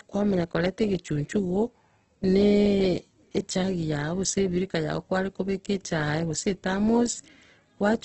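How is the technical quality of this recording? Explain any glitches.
The speech sounds rough and grainy from start to finish, and it is capped at about 8.1 kHz with nothing above. That is likely Opus compression in its music-style CELT mode, at a bitrate that points to something around 12 kbps. Starved of bits, the encoder preserved each band's overall energy but filled in the detail by folding lower bands upward or substituting noise. Voiced sounds therefore come out noisy and textured rather than clean, and the narrowed wideband bandwidth strips away the airy top end.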